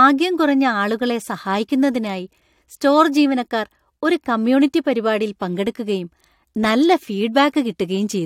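No technical faults can be heard anywhere in this speech recording. There is nothing to place in the timeline.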